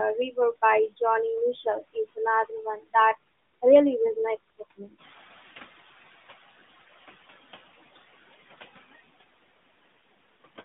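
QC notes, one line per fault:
throughout: noise suppressor artifacts. The suppressor pulls down the bands it judges to be steady noise, about 11 dB, frame by frame, so the background dips between phrases and swells back under the speech. The line is band-limited to roughly 150 Hz to 3.6 kHz, consistent with a narrowband mobile path at light codec damage.
4.98–6.8 s: noise suppressor catching up. Room noise jumps by about 12 dB at around 5 s, and the suppressor's noise estimate trails behind it. The louder background comes through with little reduction at first, then sinks by about 10 dB over about 1.8 s as the estimate adapts to the new floor. After settling, the raised room noise sits about 19 dB below the speech.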